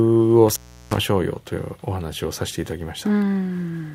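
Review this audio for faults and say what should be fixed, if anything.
Between 0.49 and 0.97 s the speech drops out with crackle at each edge and faint hiss. This is an intermittent contact, with the line open for about 0.35 s. Reseat or replace the loose cable or connector, and secure it so movement cannot break the connection.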